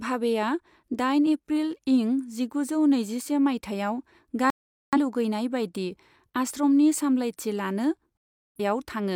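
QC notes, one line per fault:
4.50–4.98 s and 8.18–8.61 s: digital broadcast dropout. The speech cuts to silence after "नैजिसे मायथाइयाव" and returns at "लुगैनाय बायदि आश्रमनि सामलायथि", then cuts again after "बायदि आश्रमनि सामलायथि लानो". The receiver muted while it had no valid frames, so each gap of roughly 0.4 s is lost.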